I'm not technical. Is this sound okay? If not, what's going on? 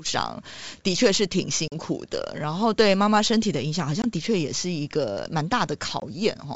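No. There is packet loss on an ADPCM call at 1.68 to 1.75 s, 4.02 to 4.06 s and 6.00 to 6.06 s. Small pieces of the call never arrived: about two packets (40 ms) in the first gap and about one (20 ms) in each of the others. Each becomes a sudden hole of silence. The receiving end then briefly loses track of how the sound was changing, so speech returns slightly distorted before settling. The G.722 wideband telephone coding underneath sounds clear.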